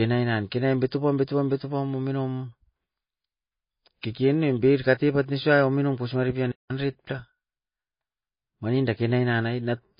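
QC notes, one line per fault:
Throughout: MP3 compression. The speech has a watery, swirling quality, with s sounds turning metallic and chirpy and consonant attacks smeared. Nothing is present above 5.1 kHz, which fits a low bitrate of around 24 kbps. A starved encoder likely cut the treble at a fixed point and dropped weak frequency lines that flicker on and off between frames. That flicker is what separates it from a plain low-pass filter, which would dull the sound without the swirl.
6.51 to 6.71 s: playback stall. Just after "pos maripian" the speech stops dead for 179 ms, then carries on. The output likely went silent because the player ran short of data or its thread was held up, and the sound resumed once it recovered. The gap is a clean, complete silence of a noticeable length in mid-flow. That sets it apart from a brief click, a crackle, or the garbled fill of packet-loss concealment.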